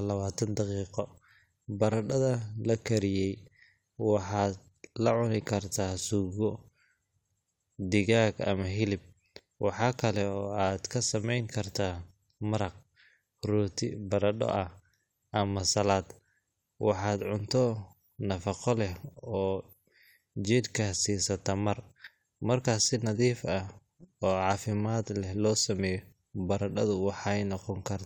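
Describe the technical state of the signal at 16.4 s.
At 16.4 s the speech plays through cleanly, with no technical fault in the signal at that moment.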